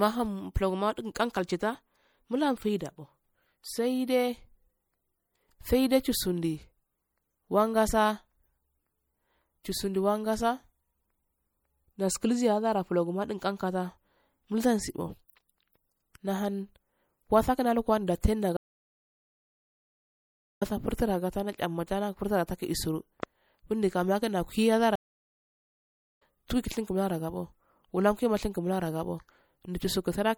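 The whole speech clip has a watery, swirly quality, with the top end cut off and chirpy, metallic artefacts on the s sounds. Consonant attacks smear as well. That's likely MP3 compression running short of bits, and the damage is heavy enough that it points to a low bitrate around 64 kbps. The encoder drops the treble above a fixed point and lets weak frequency detail flicker in and out from frame to frame.

At 18.57 s there's a stream reconnect. The audio goes dead for about 2.05 s and picks up again at 20.63 s. When it comes back, the speech has jumped ahead by roughly a second and a half. It's a live-style stream, so the player just rejoins wherever the stream has got to. The same thing happens again at 24.96 s, this time with about 1.25 s of silence, and playback resumes at 26.22 s around a second further on.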